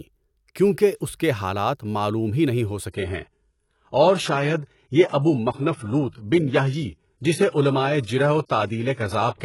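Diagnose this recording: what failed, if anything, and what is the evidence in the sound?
Network stage: the player fell back to an adaptive stream at a lower bitrate. At 2.91 s the speech turns suddenly duller, with nothing above 11.4 kHz, until the end. There is no gap. The sound points to a slowed connection forcing a switch from 96 kbit/s AAC to 12 kbit/s HE-AAC.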